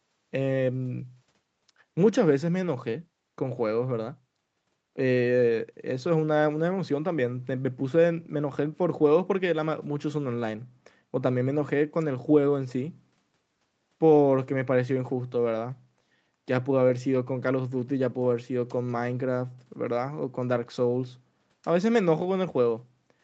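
Nothing goes wrong in this speech at any point; it just has the usual sound of a call, with nothing above about 8 kHz, which fits a wideband codec setting like Opus on a normal call.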